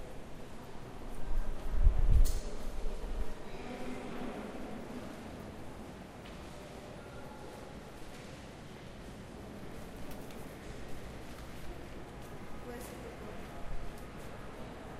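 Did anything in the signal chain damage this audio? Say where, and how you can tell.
Yes. Chunks out of order at 5.90 to 5.94 s, a driver, buffer or delivery-stage fault: a 20 ms chunk arrived or was written one chunk late, so two adjacent chunks swap places. Nothing is missing, but the sound jumbles briefly across three hard joins.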